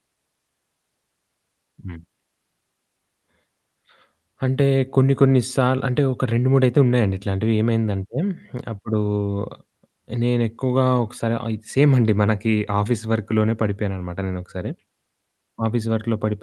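No technical faults can be heard anywhere in the recording. The speech comes through a call path whose codec trims the top end at around 12 kHz, which fits Opus running at a moderate call bitrate, and that coding adds only its usual coding noise.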